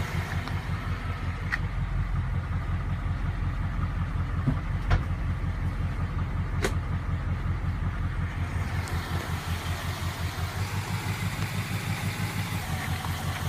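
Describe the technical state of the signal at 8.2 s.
At 8.2 s the signal is intact, with no audible technical fault.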